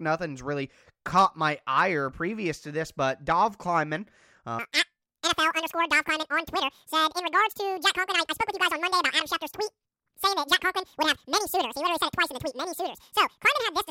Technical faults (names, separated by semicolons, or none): audio read two samples at a time (double speed)